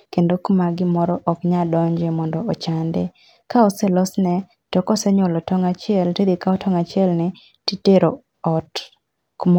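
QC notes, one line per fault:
No technical fault is present; the signal holds steady, with no interruptions, level jumps or added noise at any point.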